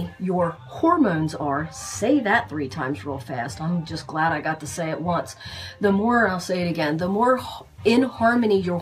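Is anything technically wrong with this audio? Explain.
Yes. From 0.55 s to 6.54 s the audio suffers from de-emphasis applied wrongly: a treble-cutting curve, intended to reverse a high-frequency boost, was applied where no such boost existed or was applied twice. The response tilts smoothly downward above the midrange, reaching about 8 dB below the 1 kHz level at 10 kHz, so this section sounds dull and muffled. On a spectrogram the upper bands fade gradually in that span; the waveform shows little change.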